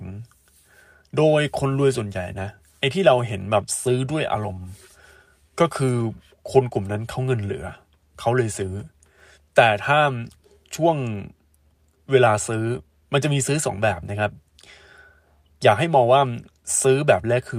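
No technical faults are audible anywhere in the speech recording.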